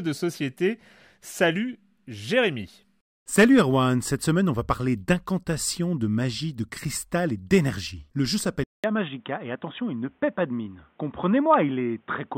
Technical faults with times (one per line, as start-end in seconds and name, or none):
8.64-12.38 input switched to a poorer device